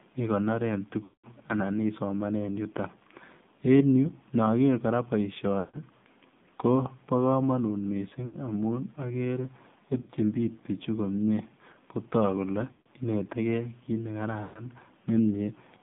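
Throughout, the AMR narrowband mobile codec confines the speech to 150 Hz to 3.6 kHz, with a buzzy, synthetic texture that fits a low bitrate near 7.4 kbps; a spectrogram shows nothing above that band. Lost AMR speech frames occur at 1.04 s (200 ms, just before "anan isomanen"), 5.60 s (140 ms), 8.26 s (80 ms), 10.02 s (60 ms), 12.72 s (140 ms) and 14.44 s (120 ms). At each one the decoder repeats the last pitch and vocal tract settings at falling gain, so the sound smears and fades, visible as a tapering waveform and a blurred spectrogram patch.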